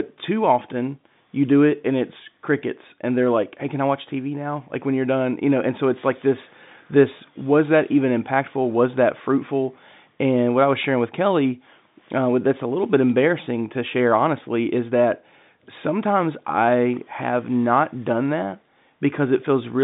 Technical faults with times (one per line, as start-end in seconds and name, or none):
none